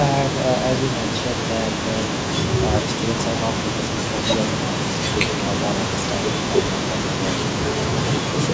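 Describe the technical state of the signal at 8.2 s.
From 8.02 to 8.37 s the speech dips by about 20 dB, likely speech suppressed in double talk: the echo canceller ducked it while the far end talked.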